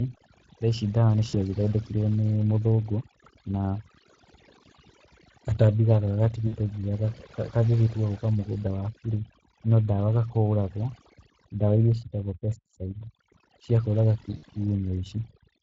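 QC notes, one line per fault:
Throughout: overdone noise removal. The noise suppressor was set far too aggressively, so every frequency band that came close to its noise estimate was pulled down hard or switched off entirely. The background drops, dotted with small twinkling specks where isolated bands flicker on and off. Quieter parts of the speech fall below the threshold along with the noise.
Throughout: Speex codec. The speech was passed through Speex, a CELP codec, at about 20.6 kbps, and its damage is plainly audible. The codec has only a limited bit budget for the excitation signal, so the fine detail of the voice is replaced by a coarse approximation. As a result, the speech sounds rough, somewhat hoarse and grainy. The band above 8 kHz carries shaped noise in place of real detail, which adds a hissy, synthetic edge.
1.29–1.36 s, 6.47–6.59 s, 14.37–14.45 s: VoIP packet loss concealed by the speech codec. 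Audio went missing three times, about 40 ms at the first gap and about 60 ms at each of the other two, and the decoder filled each hole by extrapolating from its last pitch and filter settings while lowering the gain frame by frame. Each gap is heard as a short buzzy or coloured smear that fades. Because every frame depends on the one before it, the voice stays weak and distorted briefly after each gap.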